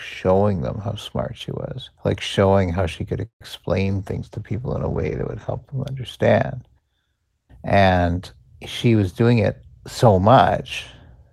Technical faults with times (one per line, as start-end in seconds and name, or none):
3.25-3.43 call audio freeze
3.85-5.81 call bitrate drop
10.04-10.45 jitter buffer speed-up